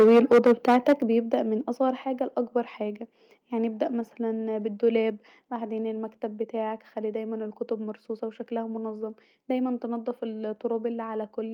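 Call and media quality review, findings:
Microphone overload, 0.0–0.93 s. Harsh, crackly speech peaks, flattened tops, about 8 dB over full scale, a large share of samples clipped. Likely mic input gain set too high, saturating the converter.

Microphone volume stepped down, 1.02 s. Abrupt level drop of about 7 dB, speech and background together. Likely call software cutting device input gain after the clipped start.

Microphone overload, 1.33–1.35 s, just before "من اصغر". Brief crackle, about 2 dB over, few samples clipped. Likely remaining input gain still slightly too hot.

Microphone volume stepped down, 2.04 s, between "من اصغر" and "لأكبر حاجه يعني ابدا". Second sudden drop, about 4 dB. Likely automatic gain control reacting to the repeat clip.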